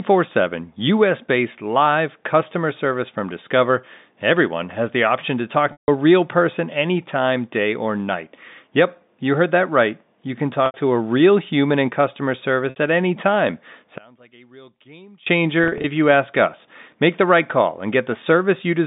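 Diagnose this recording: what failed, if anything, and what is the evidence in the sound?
Network stage: packet loss with pitch repetition at 5.72, 10.66, 12.7 and 15.64 s. Gaps of 60 to 160 ms are filled by repeating the last pitch period, giving brief buzzy holds, with the longer gaps fading into silence.

From 13.98 to 15.27 s, after "at any time", the level drops about 28 dB. One channel inverted is the likely cause. Common content cancels when the channels are summed to mono.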